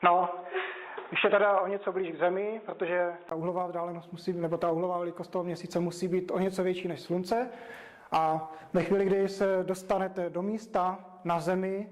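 Input switched to a poorer device, from 0.0 to 3.31 s: the opening was likely captured on a narrower-band microphone, so nothing above 3.8 kHz comes through, leaving it dull and boxy over a faint noise floor. At 3.31 s a 20 ms gap precedes full clarity, with no noticeable level jump.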